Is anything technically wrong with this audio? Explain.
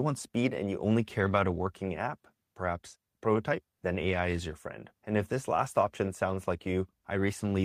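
No, nothing technically wrong can be heard in this audio. No fault turns up anywhere in the clip.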